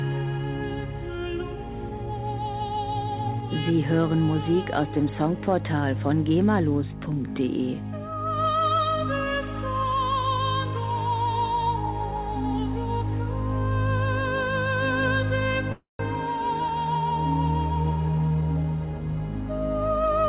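At 15.72 s a call audio freeze sets in, lasting until 16.01 s. Likely due to packets held up in transit, the last sound stretches into a fading buzz, then about 160 ms of silence. Playback resumes where it stopped, now running 272 ms later.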